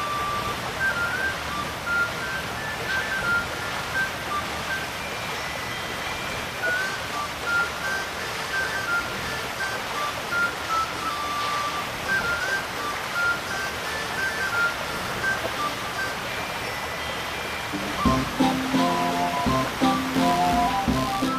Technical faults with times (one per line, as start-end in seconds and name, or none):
20.14-21.38 computer activity noise